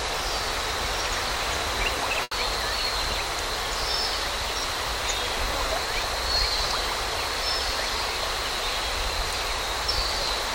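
A burst of packet loss at 2.23 to 2.34 s leaves about 80 ms concealed by a held, fading extension, then resumes with that stretch missing.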